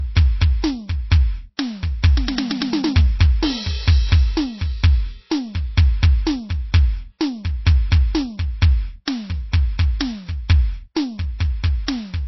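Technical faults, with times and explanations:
Throughout: low-bitrate audio saved at a high bitrate. The music has nothing above 5.8 kHz, so the airy top of the mix is missing, with the smeared, swirling texture of heavy MP3 compression. The cause is likely a very low-bitrate MP3, around 24 kbit/s, later re-encoded at something like 320 kbit/s. Unlike a file simply encoded at a low bitrate, the large file promises quality the sound cannot deliver, because the second pass cannot restore what the first removed.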